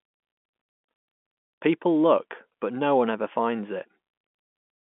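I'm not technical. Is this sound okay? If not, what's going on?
Yes, no faults found; it's ordinary telephone-line speech, with the usual phone limit of nothing above about 3.8 kHz.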